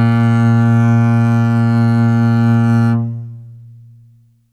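No faults are audible anywhere in this music.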